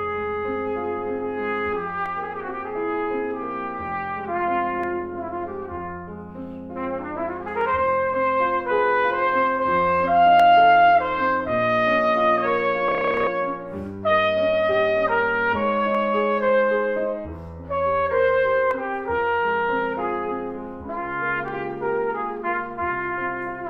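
A clock mismatch between two devices, likely drifting by roughly 70 ppm, lets the buffer between them slip periodically, dropping or repeating a few samples each time. These clock drift buffer slips are heard as regular clicks every 2.77 s from 2.06 s to 21.48 s.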